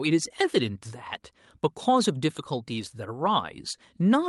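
Speech over a WebRTC call path, the top end stopping near 12 kHz as the Opus codec's bandwidth setting would suggest, with no technical faults to report.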